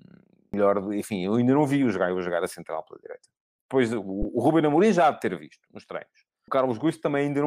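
At 0.54 s, 4.22 to 4.25 s and 6.48 s, damaged data in the compressed stream makes the decoder misread frames and lose sync, giving short chirps or blips in the speech. Each shows as a vertical broadband streak on a spectrogram and an abrupt break in the waveform.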